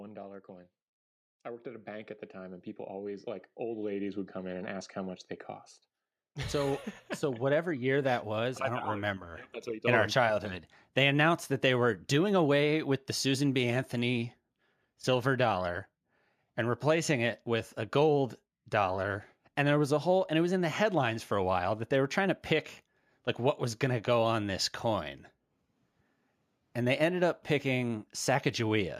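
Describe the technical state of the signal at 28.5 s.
At 28.5 s the speech signal is intact, with no technical fault present at that moment.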